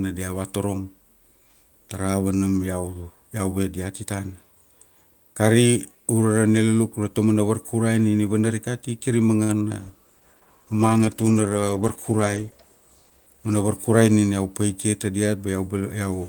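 A short stall from a late packet occurs at 9.43 to 9.51 s. A packet arrived after it was due, so the jitter buffer emptied and the receiver held the last sound for about 55 ms. Playback then resumed where it left off, adding 55 ms of delay. The speech drags briefly, with a faint buzzy sustain.

Short concealed packet loss follows at 9.69 to 9.72 s. Here the audio never arrived in time, and 20 ms of speech is simply gone. The decoder extended the preceding sound for about 10 ms before blending back into the real signal. The result is a quick smear or wobble.

A call bitrate drop begins at 9.82 s and lasts until 14.14 s. The bandwidth estimate fell, and the encoder went from 32 kbps to 13 kbps, staying at the lowest rate for 3.3 s. Coarser coding and lost high frequencies make the speech sound muffled and watery through that stretch.

A jitter buffer speed-up runs from 13.17 to 13.50 s, inside the low-bitrate stretch. 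The buffer held more audio than its target, so the receiver repeatedly removed pitch-period-length pieces, roughly 50 ms in total. Playback runs at 114% speed with unchanged pitch, so the speech sounds briefly hurried.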